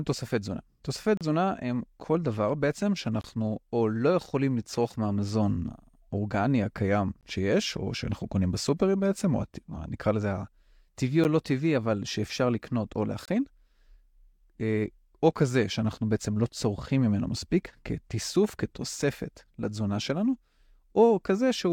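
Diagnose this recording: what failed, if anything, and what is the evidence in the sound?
Hard-edged silent holes of 11 to 34 ms cut into the speech at 1.17, 3.21, 7.21, 11.24 and 13.26 s, on a 2-second grid. This is a gap between stream segments at playback: the segment timestamps don't meet, so the player fills each join with silence.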